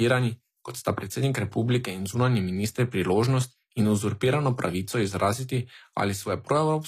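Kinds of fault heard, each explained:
HE-AAC compression: plainly audible codec damage leaves s sounds gritty and metallic, as treble is rebuilt from copied lower bands. A spectrogram shows repeated, blocky upper-band patterns and nothing above 14.9 kHz, likely from HE-AAC near 24 kbps.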